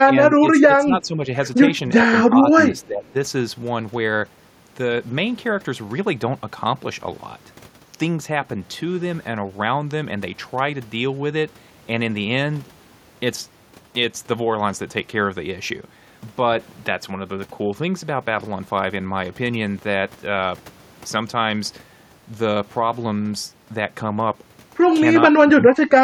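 Speech suppressed in double talk shows up at 0.05 to 0.15 s, 0.67 to 1.28 s, 2.04 to 2.14 s, 2.69 to 3.15 s and 25.31 to 26.04 s. In each stretch the speech level dips, from a slight sag near 1 s to a deep drop of about 25 dB in the final burst. The likely cause is an echo canceller hearing both ends at once and ducking the near talker along with the echo.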